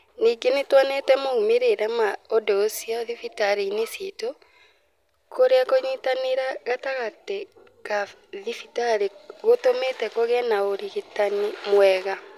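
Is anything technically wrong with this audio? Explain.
No, nothing technically wrong turns up anywhere in this speech recording.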